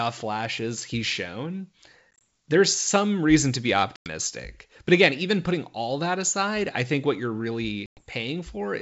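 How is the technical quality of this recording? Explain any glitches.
The recording, carried over G.722 wideband telephone coding, has three stretches of packet loss on an ADPCM call.

The first, from 2.14 to 2.22 s between "flashes he's shown" and "there's some reason to", is scattered: about 60 ms missing over 100 ms, in gaps of up to 20 ms. The others are larger losses: 100 ms at 3.96 to 4.09 s after "some reason to be", and 110 ms at 7.86 to 8.02 s after "I think what you're".

Lost packets become abrupt silence. The decoder's adaptive predictor and step size then no longer match the sender's, so the audio after each hole comes back off until they realign. That hard-edged gap followed by a short settling period distinguishes it from concealed loss, where the gap is filled with a smeared repeat.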